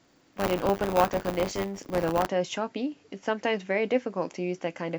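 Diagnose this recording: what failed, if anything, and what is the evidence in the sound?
Buffer tearing at the driver buffer stage, 0 to 2.28 s: a 100 Hz rattle as each 10 ms period splices in a sliver of older audio, showing regular vertical striations on the spectrogram.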